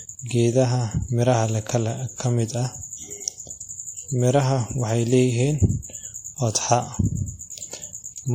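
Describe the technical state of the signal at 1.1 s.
Transcoding between lossy codecs, likely AAC re-encoded as WMA, runs throughout. At 1.1 s the speech carries both codecs' layered artefacts and nothing above 16.5 kHz.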